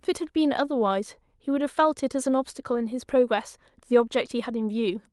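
No technical faults are audible.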